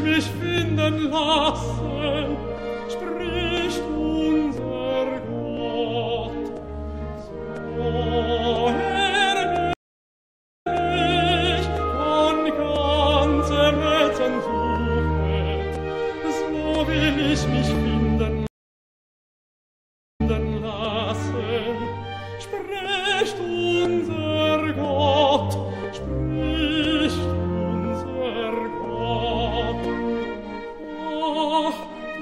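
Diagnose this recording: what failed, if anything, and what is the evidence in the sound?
At the codec stage, the whole clip has a watery, swirling quality with metallic chirps on bright transients and smeared attacks, most likely from MP3 compression at a bitrate that sounds like roughly 64 kbps. With bits scarce, the encoder cuts the treble at a fixed frequency and drops weak spectral lines frame by frame. On a spectrogram this shows as a hard horizontal ceiling and speckled, flickering patches of energy below it.

At the driver or buffer stage, periodic USB or driver dropouts cause a tick about once a second, from 0.58 s to 31.83 s, around thirty in all. Each loses roughly a millisecond of audio that is skipped rather than filled. A background task blocking the bus at a fixed interval explains the even spacing. The waveform shows tiny discontinuities at a regular 1.0 s pitch, and the spectrogram shows matching thin vertical broadband lines where signal is present.

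At the network stage, two stream reconnects occur. From 9.73 s the sound stops for about 0.92 s and resumes 0.29 s earlier than where it left off, so a short stretch repeats. From 18.47 s the gap lasts about 1.73 s and playback picks up 0.37 s earlier. The player lost the connection, reconnected and restarted its decoder, and the server resent a recent burst. The waveform shows flat silence followed by duplicated material, and the restart may show a brief fade-in.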